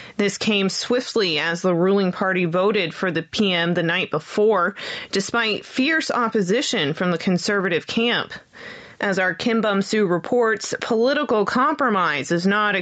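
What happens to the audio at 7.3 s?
At 7.3 s the level keeps breathing, with a swing of around 15 dB, so loud and soft parts sit squashed close together. This gain pumping runs through the whole clip, not just this moment. The likely cause is input gain set far too high, with a fast limiter or compressor clamping down on every peak and releasing between them. The audio is also band-limited to 8 kHz by the call path.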